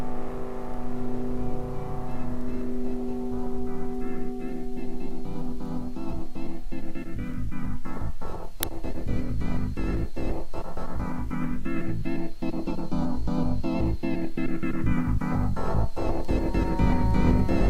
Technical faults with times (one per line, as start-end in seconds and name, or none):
8.63 uninitialised buffer
14.75 DAB burbling